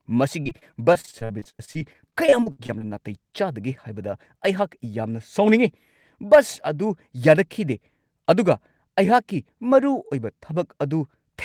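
Repeated packet loss (robotic sound) affects this speech clip from 0.43 to 2.82 s. Over that stretch the stream keeps dropping short chunks, about 28 gaps of up to 46 ms each, and each hole is papered over by extending the sound that came just before it. Roughly a quarter of the span is this patched-in material, so the speech turns choppy and takes on a buzzy, mechanical quality, with small pieces missing between the repeats.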